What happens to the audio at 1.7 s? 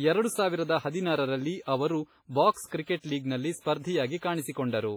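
At 1.7 s the speech sounds ringing and washy, with a hiss that rises and falls with the signal, and the damage is heavy. It is not a momentary event; the same WMA compression colouring runs through the whole clip. The likely cause is a transform codec working with long blocks, which smears quantisation noise across tens of milliseconds and drops weaker spectral lines entirely, consistent with a low bitrate of about 24 kbps.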